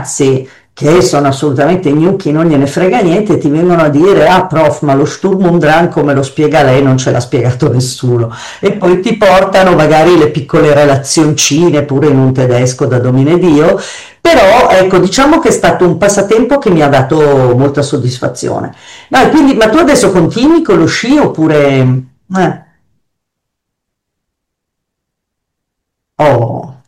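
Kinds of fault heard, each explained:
Hard clipping: The speech is driven about 14 dB beyond what some stage in the chain can pass, so its peaks are sliced off flat. That happens throughout the clip, not just on occasional loud moments. Roughly a sixth of the samples sit at the limit. The flattened tops add harmonics high in the spectrum. The result is a harsh, gritty fuzz on every stressed syllable and loud passage, more than a light crackle on isolated peaks.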